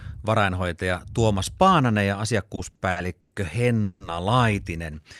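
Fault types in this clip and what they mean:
Repeated stalls (stutter): Between 2.55 and 3.33 s the speech catches and drags four times, with a smeared continuation of the preceding sound holding each pause for a total of about 220 ms, the longest 110 ms, roughly 28% of that stretch. Nothing is skipped, so the speech resumes exactly where it halted. Packets were reaching the receiver late or too slowly, letting its jitter buffer drain repeatedly while it stretched the last sound to cover.
Call audio freeze: From 3.83 to 4.02 s the speech halts once, and for about 170 ms the last sound is held and extended rather than dropping to silence. Afterwards the speech picks up without losing anything, now running 170 ms later than before. The likely cause is a burst of packets held up in transit, emptying the jitter buffer so the receiver had to fill the wait until they arrived.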